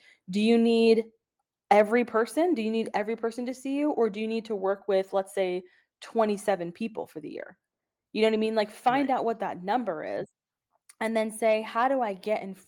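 At 1.02 s the speech and its background drop together by about 3 dB in a single step and stay at the lower level. This is a microphone volume stepped down event, likely the call software lowering the device's input volume after judging it too loud.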